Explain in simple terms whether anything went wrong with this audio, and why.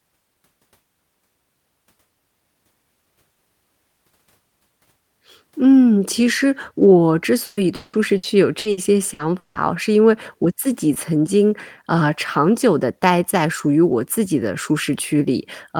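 From 7.45 to 9.58 s there is repeated packet loss (robotic sound): audio data kept going missing, and seven patched-over gaps leave the speech choppy with pieces missing.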